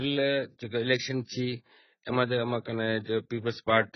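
AAC compression damage runs through the whole of this speech clip. Nothing is present above 6 kHz, so sibilants lose their edge and the sound turns dull and muffled. What remains is smeared and warbling, with a fizzy, unstable texture on sustained sounds. The cause is likely heavy AAC-LC coding at a bitrate as low as about 12 kbps. The encoder lowers its cut-off and leaves gaps in the spectrum it cannot afford to code.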